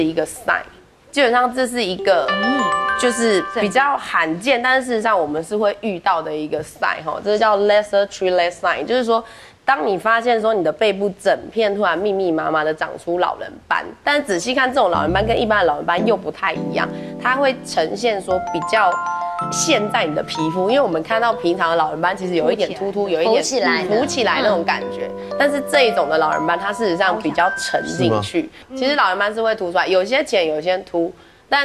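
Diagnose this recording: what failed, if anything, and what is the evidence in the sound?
Nothing in this recording points to a failure at any stage; it just sounds the way it should, with no dropouts, distortion or glitches to chase down.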